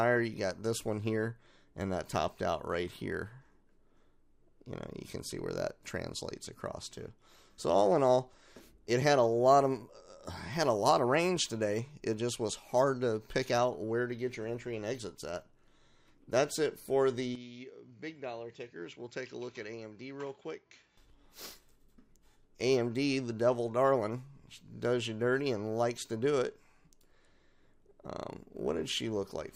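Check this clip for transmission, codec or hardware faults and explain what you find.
One fault: from 17.35 to 20.97 s, the sound suddenly loses everything above 7.6 kHz, drops by about 10 dB, and picks up a new, faint noise floor, with no gap at either edge. The likely cause is an input switched to a poorer device whose narrower band, lower gain and own hiss replace the original path. A codec bandwidth drop would not also shift the level and background noise.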